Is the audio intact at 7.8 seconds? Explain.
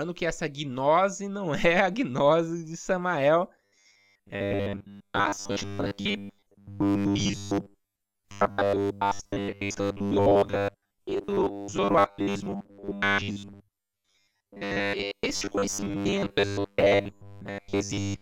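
No. At 7.8 s the speech is inside a stretch of robotic sound from repeated short buffers running from 3.64 s to the end. It has a rigid 100 Hz metallic buzz, likely from a 10 ms buffer replayed while roughly 70% of the real audio is skipped.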